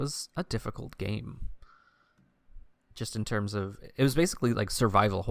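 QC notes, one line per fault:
No technical faults were heard anywhere in the speech signal.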